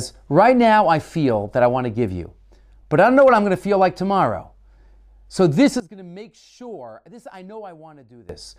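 From 5.8 to 8.29 s the speech collapses by about 21 dB into a faint residue, likely from one channel inverted cancelling the centred voice in mono. Unlike a plain level drop, what remains is only the small mismatch between the channels rather than the whole sound made quieter.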